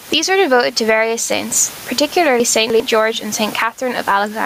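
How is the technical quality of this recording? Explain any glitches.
The recording has two clear technical faults: level pumping throughout and a jumbled passage near the middle.

Gain pumping runs through the whole clip. Input gain set far too high, with a fast limiter clamping it, is the likely cause. The level swings by around 15 dB, squashing the speech, with the room noise about 30 dB below the speech. On a waveform the envelope looks flattened.

Chunks out of order appear from 2.4 to 2.8 s. A 100 ms chunk arrived three chunks late and plays after the audio meant to follow it. This causes a garbled moment with three hard joins.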